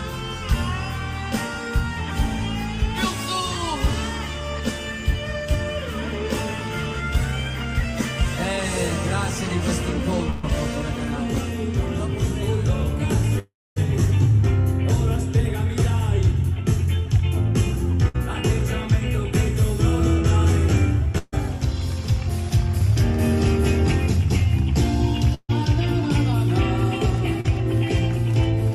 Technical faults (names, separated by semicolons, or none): burst of packet loss; long network dropout; short concealed packet loss